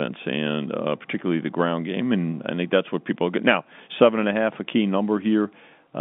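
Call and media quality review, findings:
No faults found; telephone-band speech path behaving as expected.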